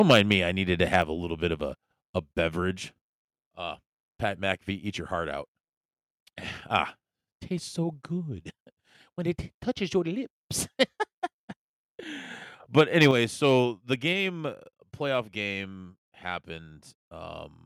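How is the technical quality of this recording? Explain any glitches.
The recording has two recurring level problems: harsh, clipped peaks at two points, each followed by a sudden drop in overall loudness.

Microphone overload occurs from 0.0 to 0.32 s and again from 12.77 to 13.11 s. The loudest syllables turn gritty and crackly, with a flattened, buzzing edge. The likely cause is an input gain set too high, so the peaks ran past the converter's ceiling, by about 6 dB in the first stretch and about 2 dB in the second. A small share of the waveform had its tops sheared off, and that squared-off shape adds the harsh distortion.

The microphone volume is stepped down at 1.02 s, and again at 13.11 s, right as the second overload ends. Voice and background both drop abruptly together, by about 4 dB the first time and about 6 dB the second, rather than fading. Because each drop follows a distorted peak so closely, the cause is likely the call software detecting clipping and cutting the device's input volume in a single step.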